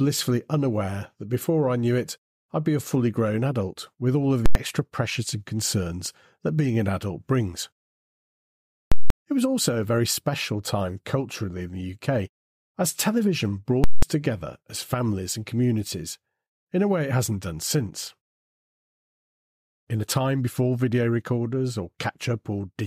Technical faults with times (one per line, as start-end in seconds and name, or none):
4.46-4.55 invalid numbers at full scale
8.92-9.10 invalid numbers at full scale
13.84-14.02 invalid numbers at full scale